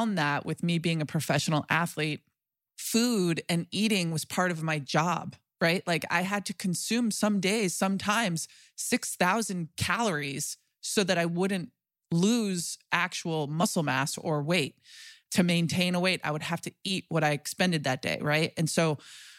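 No audible technical faults in this speech recording; nothing in the signal chain calls for attention.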